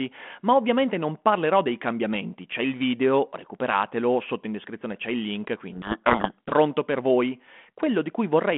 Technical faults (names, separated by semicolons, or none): codec payload misread